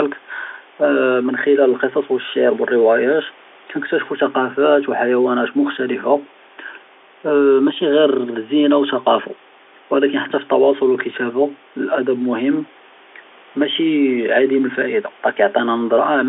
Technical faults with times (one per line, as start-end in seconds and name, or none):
none